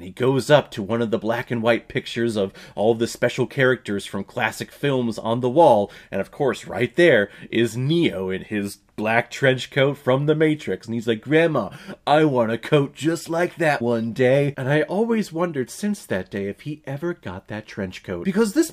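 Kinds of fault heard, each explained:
No faults of any kind are audible in this clip.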